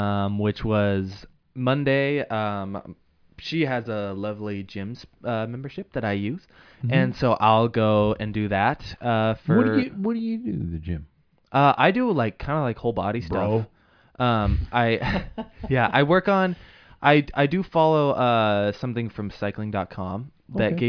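A speech recording with no audible technical fault anywhere in the signal.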